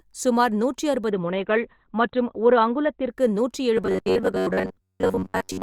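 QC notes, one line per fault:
1.11–3.11 s, adaptive stream at a lower bitrate: the top end turns dull, with nothing above 16.5 kHz and rising codec artefacts. It switches suddenly, without a gap. The stream fell back to a leaner version, consistent with Opus dropping from about 64 to 12 kbit/s.
3.78–5.62 s, robotic sound from repeated short buffers: the speech becomes a rigid, metallic buzz at 93.8 Hz that still loosely tracks the words through to the end. The likely cause is late-arriving audio being patched by looping roughly 10.7 ms fragments, replacing most of the real signal.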